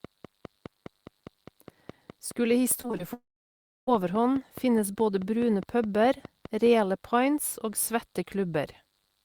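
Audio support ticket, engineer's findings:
Train of clicks, 0.05 to 6.67 s, ending before "reale pints og". Regular ticking at about 4.8 clicks per second, some 30 in all, peaking about level with the speech. Likely external interference or a faulty connection or power supply injecting similar pulses.

Repeated packet loss, 2.81 to 3.01 s. Choppy, robotic speech. Four short holes, longest 20 ms, about 80 ms lost in total. Each is patched by extending the previous sound, so concealment covers nearly 40% of that span.

Long network dropout, 3.13 to 3.89 s. About 740 ms of audio never arrived. Concealment extends the last sound briefly, then fades to silence for about 660 ms. Speech resumes with that section missing. Likely a network stall.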